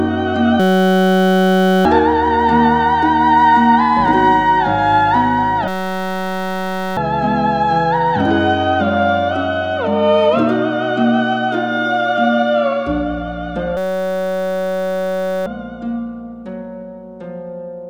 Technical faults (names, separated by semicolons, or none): system hang loop